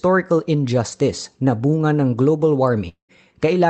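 At 1.73 to 1.77 s, between "injustice na" and "ng global", and again at 2.17 to 2.21 s, a lost packet rebuilt from error correction leaves a 40 ms patch that is rougher and noisier but gap-free. A spectrogram shows smeared, grainier harmonics, and the waveform has no break.

From 2.89 to 3.12 s, right after "ng global", the sound stretches into a fading buzz or hiss and then about 0.11 s of silence, with roughly 0.2 s of audio never heard. This is likely a long network dropout. The waveform shows a tapering tail collapsing to a flat line, and the spectrogram shows a blurred smear ending in a blank column.

Recovery at 3.09 to 3.13 s is another 40 ms rebuilt frame, grainy where the audio re-enters. Across the clip, content stops near 8 kHz on the spectrogram, as expected from the call codec.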